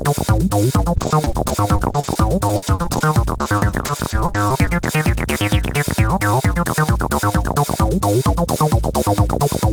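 Repeated packet loss (robotic sound) runs from 0.97 to 3.10 s and again from 3.38 to 4.85 s, with a brief clean break between. The audio keeps losing short chunks in quick succession, each patched by stretching the last sound, so it turns choppy. In the first stretch about 450 ms is filled and the longest hole is 60 ms. The second stretch has about 260 ms filled and holes up to 40 ms.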